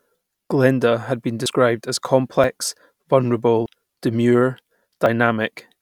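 Four abrupt jumps interrupt the speech, each a small skip forward in the sound with no gap of silence: at 1.46 s, right after "has been", then at 2.44 s, 3.66 s and 5.06 s. The skips at 1.46 s and 3.66 s lose more, something like 70 ms, while the other two lose only a few tens of milliseconds. The likely cause is a dropped buffer (overrun), where audio blocks were overwritten before being read and the surrounding sound was spliced together.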